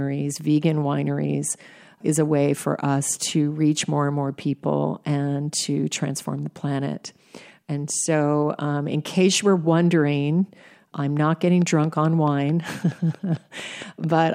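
Speech carrying a train of clicks from 11.62 to 14.27 s: about fifteen evenly spaced ticks at 4.55 per second, peaking around 5 dB above the speech. Such repeating pulses likely come from interference from nearby equipment, or from a faulty connection or power supply.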